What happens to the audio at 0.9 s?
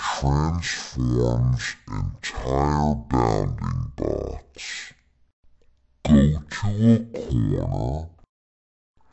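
Wrong sample rate, present at 0.9 s and throughout: the audio plays at half speed and a full octave low, which fits 44.1 kHz material run at 22 kHz.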